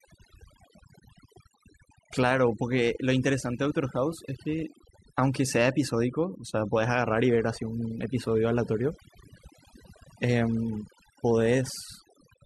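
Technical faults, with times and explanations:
throughout, overdone noise removal: lowered background with twinkling specks, because heavy noise reduction switches off bands near its noise estimate, taking quiet speech detail too.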